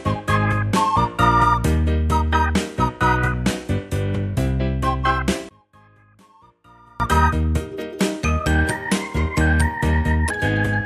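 From 5.49 s to 7.00 s, one stereo channel was likely inverted in polarity, so whatever the two channels share cancels once they are heard summed to mono. The level falls by about 33 dB across that stretch, leaving only the faint residue where left and right differ, until the full sound returns just after 7.0 s.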